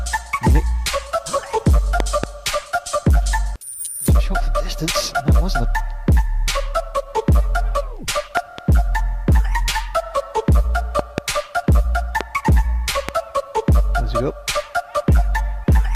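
Sharp loud pops, well above the level of the audio, break through while the sound carries on underneath: double pops at 2.00–2.26 s, 8.37–8.61 s and 10.99–11.20 s, and single ones at 12.21 s and 13.09 s. These are likely voltage spikes from a plug, switch, static or driver glitch.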